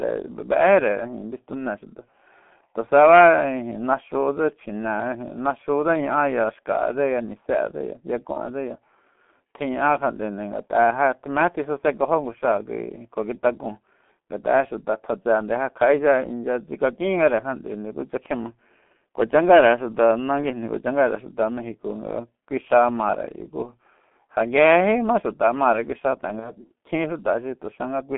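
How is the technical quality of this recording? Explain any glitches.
The recording is heavily degraded throughout by a low-rate speech codec, with two brief dropouts.

Throughout the clip, speech sounds muffled and hoarse, with smeared consonants and nothing below 200 Hz or above 3.4 kHz. These are the marks of the G.723.1 codec, with heavy damage that fits a 6.3 kbit/s rate.

At 8.33 to 8.42 s and again at 26.39 to 26.51 s, the voice is briefly stretched out and fades, then stays weak for a moment. This is VoIP packet loss concealed by the speech codec. Each gap fits one lost 30 ms frame, rebuilt from the previous pitch and filter.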